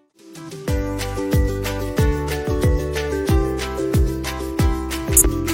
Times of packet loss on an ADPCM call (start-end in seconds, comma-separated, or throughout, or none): none